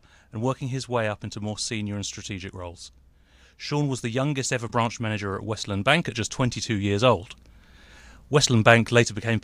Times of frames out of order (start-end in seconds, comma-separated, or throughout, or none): 4.67-4.72